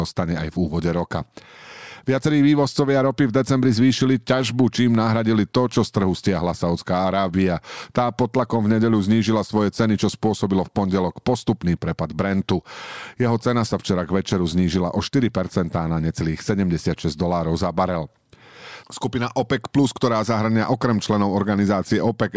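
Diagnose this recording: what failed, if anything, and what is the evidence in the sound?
Nothing failed: no stage of the chain, from capture through storage to playback, leaves any audible evidence of a fault in this speech recording.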